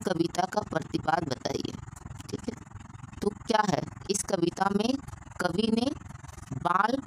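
From start to finish the sound pulses with overlap-add ripple: it was split into windowed frames and rejoined with an overlap whose gains do not add up evenly, so the level dips once per frame, around 20 times a second, by about 60 dB. That gives a harsh, fast flutter. Unlike dropouts, the dips never leave gaps with missing material; unlike a musical tremolo, they are deep, rigidly periodic and locked to the frame rate.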